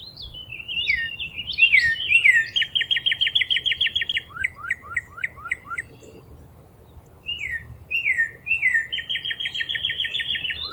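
At 4.08 to 4.14 s there are chunks out of order: one 20 ms block was delivered two blocks late, so it plays after the two that should follow it. Nothing is missing, but the 60 ms stretch comes out briefly jumbled. On the waveform, three hard joins appear as sudden jumps in level or phase; the spectrogram shows matching thin vertical broadband lines at each seam.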